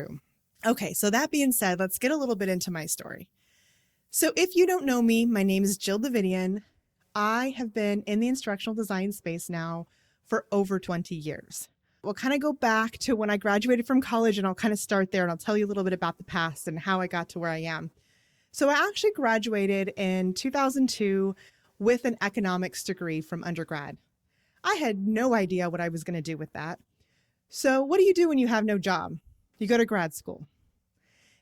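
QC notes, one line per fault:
0.0–6.17 s, pre-emphasis left on: treble is lifted about 10 dB at 10 kHz relative to 1 kHz, fitting a 50 µs FM curve with no matching de-emphasis, so the speech sounds thin and hissy. Unlike harsh sibilance alone, the smooth rising shelf brightens everything above a few kHz.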